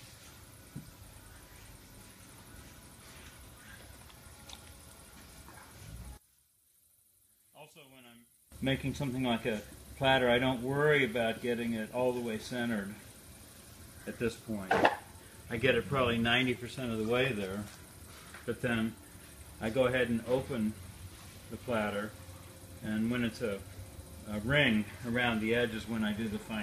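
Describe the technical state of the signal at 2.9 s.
At 2.9 s the signal is intact, with no audible dropout, clipping, glitch or other fault at that point.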